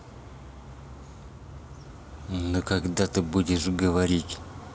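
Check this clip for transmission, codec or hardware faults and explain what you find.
Nothing found; no fault is audible anywhere in the recording.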